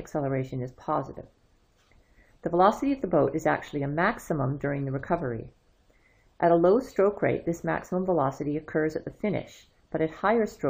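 No technical faults can be heard in this clip.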